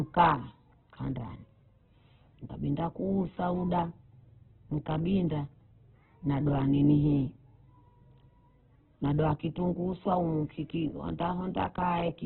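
From start to finish the speech sounds rough and grainy, with nothing above 4.1 kHz, so it comes across narrowband and boxy. That's likely heavy Opus compression in its music mode, filling starved bands with noise, which fits a bitrate down around 8 kbps.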